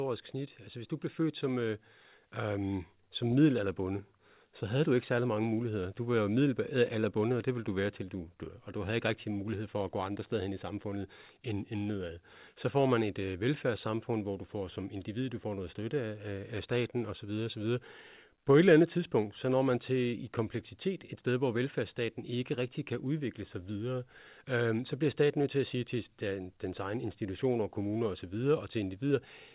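No technical faults can be heard in this speech clip. It comes through G.711 telephone coding in working order, with nothing above 4 kHz and a faint noise riding on the signal's level, which fits an A-law path at 8 kHz.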